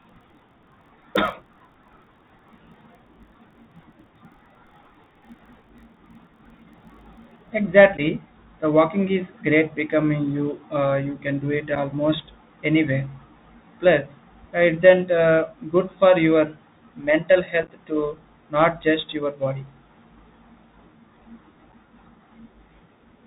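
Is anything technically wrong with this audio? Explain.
Yes, there are a few things going on.

The whole clip runs through a Bluetooth CVSD headset codec. That one-bit, step-adaptive narrowband link cuts everything above 4 kHz, s sounds turn scratchy, and a grainy hiss sits under the speech.

From the start to about 7.52 s there's a block size mismatch with padding. A stage is handing over blocks shorter than the next one reads, so every block gets a zero-filled gap. That's audible as a 43.1 Hz buzz, which fits a 1024-sample read block, and the speech drags about 0.1% slow at normal pitch.

Then there's unconcealed Bluetooth headset packet loss. Short dropouts with hard edges land at 7.97 to 8.00 s (11.2 ms), 11.75 s (7.5 ms), 18.83 s (3.8 ms) and 21.72 s (7.5 ms). Around 17.63 to 17.71 s, 33.8 ms of holes are scattered across 67.5 ms, which sounds like a rough, chopped crackle.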